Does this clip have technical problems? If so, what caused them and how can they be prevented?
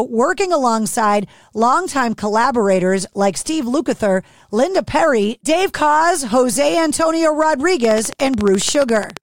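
Yes. The likely cause is a faulty connection or power supply or nearby equipment injecting a pulse into the signal path at a steady rate. This produces a train of clicks from 7.85 to 9.18 s: about twenty near-identical ticks at a regular 14.4 per second, peaking around 10 dB above the speech. Keeping cables away from interfering devices and using a stable, properly grounded interface prevents it.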